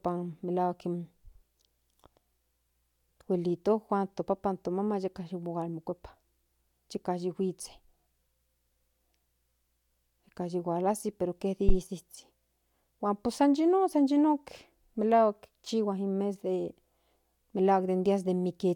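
A speech recording in which a single deep, dull thump lands between 11.69 and 11.77 s, peaking at about -11 dBFS and dying away within roughly 18 ms. That low-frequency knock is a phantom power thump: phantom power or a similar supply was switched on or off while the input was live, and the sudden DC step passed through the coupling capacitors into the signal path as a brief bass transient.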